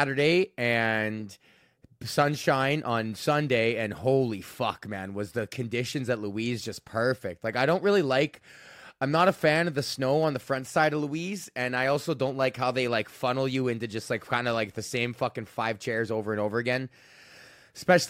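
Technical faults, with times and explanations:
No technical faults detected.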